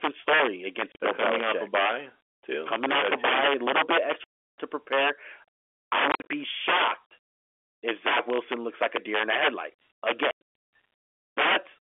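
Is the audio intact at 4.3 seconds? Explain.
No. Packets were lost between 4.24 and 4.57 s, about 340 ms, and the receiver played silence in their place. This is packet loss filled with silence, and the gap is consistent with roughly 10 ms packets. At 4.3 s the speech drops into a hard-edged hole.

Around that hole, integer overflow runs through the whole clip. Levels are pushed about 15 dB past the integer limit, so a few percent of samples wrap to the opposite sign instead of being limited. Loud peaks turn into violent cracks, sharper than clipping.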